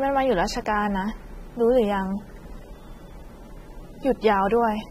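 A short speech clip carries audible AAC compression from start to finish. The top end stops dead at about 15.7 kHz, and the sound is dulled and smeared, with a fizzy, warbling texture on sibilants and held vowels that likely comes from low-bitrate AAC-LC coding, consistent with roughly 32 kbps. On a spectrogram this shows as a flat ceiling at 15.7 kHz, with patchy holes and blotchy noise-filled bands below it.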